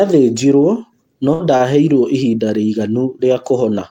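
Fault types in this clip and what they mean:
Burst of packet loss: At 1.33 s a run of audio never made it through. The receiver papered over it by carrying the last sound on for about 60 ms and fading it out, so you get a brief held smear, then the speech picks up with 60 ms gone.
Short stall from a late packet: Around 1.57 s a packet showed up late and the buffer ran dry, so the receiver held the current sound for about 24 ms until it arrived. Nothing's actually lost, just a slight hitch, and everything after runs 24 ms later.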